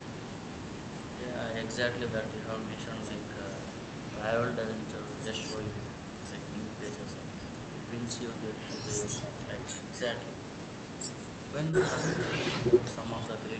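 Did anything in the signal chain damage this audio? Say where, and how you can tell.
No, nothing along the signal chain has left an audible mark on this speech recording. No stage, from capture through to playback, shows evidence of damage.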